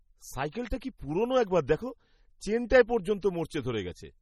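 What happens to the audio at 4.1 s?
The speech at 4.1 s carries heavy MP3 compression, likely from a very low bitrate around 32 kbps, present across the whole clip. Short of bits, the encoder drops weak frequency lines frame by frame and leaves nothing above 16.5 kHz, so the sound turns watery and swirly, with smeared attacks.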